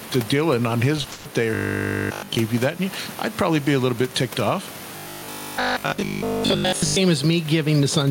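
Gain pumping runs through the whole clip. The level keeps rising and falling by roughly 15 dB. The room noise sits about 29 dB below the speech. The likely cause is input gain set far too high, with a fast limiter or compressor clamping each peak. Loud and quiet passages are squeezed toward the same level, so the speech sounds flattened and crowded.

From 0.97 to 1.26 s comes repeated packet loss, and the sound turns robotic and choppy. Five holes fall in this short stretch, the longest about 130 ms. Each one is patched by stretching out the sound just before it, so around two thirds of the span is concealment rather than real audio. About 190 ms of speech is simply missing, and what remains comes through broken up.

Robotic sound from repeated short buffers appears from 1.55 to 2.37 s and again from 4.97 to 6.99 s. The speech collapses into a stiff, metallic buzz at 50 Hz that still roughly follows the syllables. 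Fresh audio is likely arriving too rarely, so the same 20 ms slice is replayed over and over while real material is skipped, which fits a 20 ms buffer. In the first span the buzz replaces essentially everything. In the second it covers most of the sound.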